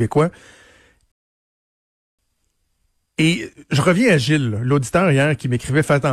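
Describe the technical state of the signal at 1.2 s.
At 1.2 s the speech has dropped to silence: the clip is inside a rebuffering stall that runs from 1.12 s to 2.19 s. The sound cuts off cleanly, stays silent for just over a second, then picks up at exactly the point where it stopped, with nothing skipped. The cause is the player exhausting its downloaded audio and pausing until more data arrived, which inserts about 1.07 s of extra time into the playback.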